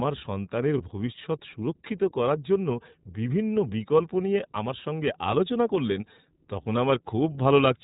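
Throughout, the speech carries iLBC codec coloration: nothing above 4 kHz, and a plainly audible rough, slightly synthetic edge from excitation coded frame by frame. The texture fits iLBC at around 15.2 kbps with 20 ms frames.

From 0.78 to 0.84 s there are lost iLBC frames, consistent with a single 20 ms frame going missing. The decoder fills the hole by repeating the last pitch cycle with added noise, heard as a brief buzzy held vowel, and the speech recovers immediately afterward.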